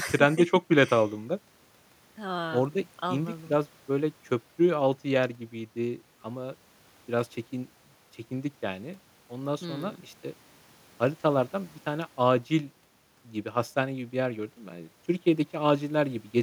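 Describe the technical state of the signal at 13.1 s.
The speech at 13.1 s plays through cleanly, with no dropout, distortion or other technical fault at that point.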